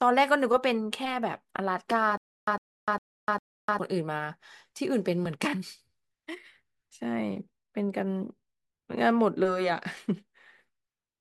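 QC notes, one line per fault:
2.17–3.79 s, stutter with silent gaps: a 104 ms fragment repeats four times with 300 ms of dead silence between, likely a stalled stream retrying its last chunk.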